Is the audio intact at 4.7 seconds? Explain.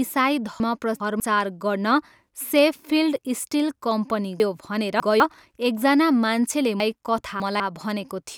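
No. From 4.4 to 5.2 s the speech has chunks out of order: one 200 ms block plays three blocks late, after the ones meant to follow it. This jumbles the speech and leaves three hard joins. Unlike a dropout, no audio is missing.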